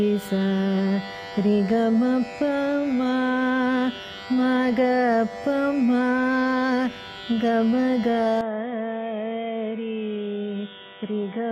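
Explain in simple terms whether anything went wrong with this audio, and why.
At 8.41 s the recording likely switched to a poorer input device, probably another microphone or a headset, with no gap at the switch. From there to the end the sound turns dull and boxy, losing everything above 3.8 kHz, and gets a little quieter with a faint new background noise.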